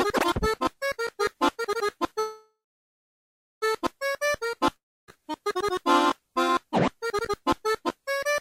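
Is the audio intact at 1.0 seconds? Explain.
Yes, the music is intact at 1.0 seconds, with no audible dropout, click, distortion or other fault at that moment.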